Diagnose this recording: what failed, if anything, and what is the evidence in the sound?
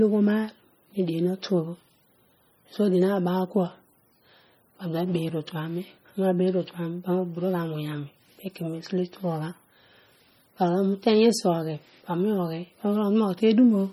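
MP3 compression artefacts run throughout the speech. The codec stage is at fault: the sound is watery and swirly, with chirpy s sounds and smeared attacks as weak frequency lines drop in and out between frames, and the heavy damage likely fits a starved bitrate around 32 kbps, with nothing above 21 kHz.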